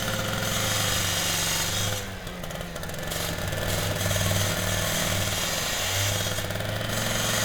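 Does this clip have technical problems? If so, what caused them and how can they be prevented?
Yes. From 3.41 to 5.23 s there is a doubled audio track: a full-level copy trails about half a second behind, likely from a second, slower capture path. It appears as repeated, evenly offset waveform shapes and duplicated spectrogram patterns, starting and stopping abruptly. Prevent it by routing the source through only one capture path and muting duplicate inputs or monitoring returns.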